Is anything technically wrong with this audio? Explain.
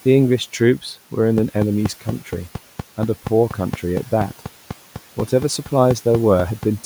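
Yes. From 1.38 s to 6.64 s the speech is overlaid by a train of clicks, around twenty of them at a steady 4.2 per second, each one much louder than the speech. The likely cause is electrical interference from nearby equipment or a faulty connection or power supply injecting the same pulse repeatedly. The even spacing and near-identical shape distinguish it from random crackle, and the ticking stays plainly audible in the pauses, above the quiet room noise.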